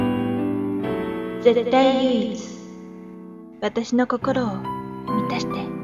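Nothing is technically wrong with the clip.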